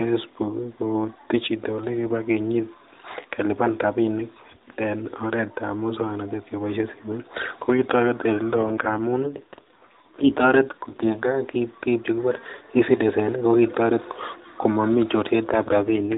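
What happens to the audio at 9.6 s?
At 9.6 s the audio is inside an AMR rate drop running from 8.53 s to 11.35 s. The mobile link has pushed the AMR narrowband codec down to a lower mode, with fewer bits describing the voice and more spent on protecting them. The sound points to a step from the 12.2 kbps mode to 5.9 kbps. The band stays narrow and unbroken with no gap, but the speech turns rougher, buzzier and more synthetic until the rate recovers.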